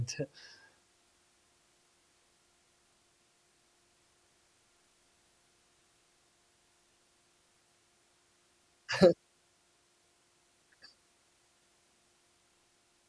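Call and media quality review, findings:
Aliasing, throughout. Sibilants sound gritty and metallic. Spectrum runs hard up to 11 kHz, which fits a resample to 22 kHz without an anti-alias filter. Energy above 11 kHz folds back as unrelated tones, roughly 30 dB below the speech.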